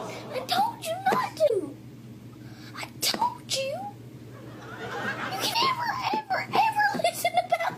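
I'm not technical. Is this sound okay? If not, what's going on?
No. At 1.45–1.51 s and again at 5.50–5.56 s there is a brief glitch from damaged data in a compressed stream. Part of the stored file was corrupted there, so the player briefly misread it and had to find its place again.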